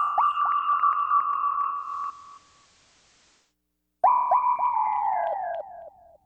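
Between 1.71 and 3.55 s there is digital radio blending to analogue FM: 234 ms cross-fades and faint hiss that a simple filter wouldn't add.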